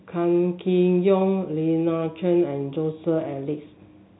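No technical faults can be heard in the speech, which carries the ordinary telephone bandwidth with nothing above 3.9 kHz.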